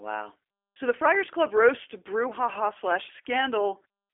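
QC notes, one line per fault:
Throughout, G.729 codec. The speech sounds rough and slightly synthetic, which fits an 8 kbit/s stream rebuilt from a vocal tract model and a few pulses per frame. The band is narrow, roughly 300 Hz to 3.4 kHz, with nothing above 3.6 kHz.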